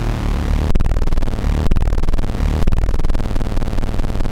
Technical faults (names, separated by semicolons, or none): mains hum